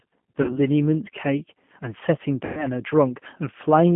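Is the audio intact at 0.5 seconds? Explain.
No. At 0.5 seconds the audio sits inside a VoIP packet loss concealed by the speech codec, running from about 0.42 to 0.59 s. Roughly 60 ms of audio never arrived, which fits about three lost packets. The decoder filled the gap by repeating its last pitch and vocal tract filter at falling gain. The sound smears into a buzzy tone or coloured noise that fades, and because each frame builds on the one before, it stays weak or distorted past the point where packets resume.

Throughout the clip, including this moment, the speech also carries G.729 codec damage, consistent with G.729A at 8 kbit/s. This codec rebuilds the voice from a vocal tract filter, a pitch predictor and a few pulses in each 10 ms frame rather than sending the waveform. The band is limited to about 150 Hz to 3.4 kHz, and the speech has a plainly audible rough, synthetic edge.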